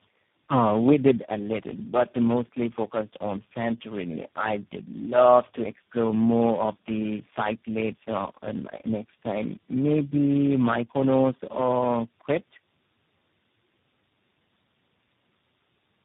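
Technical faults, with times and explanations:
Throughout: tandem speech coding. The call passed through four speech codecs in a row, each re-coding the previous one's already damaged output, so errors compound. The speech sounds rough, muffled and warbly, with nothing above 3.8 kHz.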